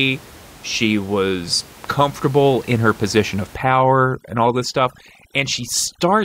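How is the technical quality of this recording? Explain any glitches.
One fault affects the recording's second half, while the room noise stays about 24 dB below the speech. From 3.55 s, after "in her position of", overdone noise removal mutes bands near the noise floor, leaving the background broken into twinkling specks and a hole-riddled spectrogram.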